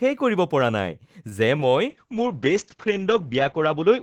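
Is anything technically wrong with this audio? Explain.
Yes, three network-related problems show up in this speech clip.

From 1.29 to 1.33 s there's a short stall from a late packet: the jitter buffer ran dry, so the decoder held the last sound for about 19 ms, adding a slight drag.

From 1.57 to 1.61 s there's a short concealed packet loss. About 20 ms never arrived, and the receiver extrapolated the previous sound, giving a quick smear or wobble.

From 1.90 s to the end there's a call bitrate drop, from 32 to 8 kbps. Audio bandwidth shrinks from 20 kHz to 8 kHz, so the sound turns muffled and rough, bottoming out for about 1.4 s.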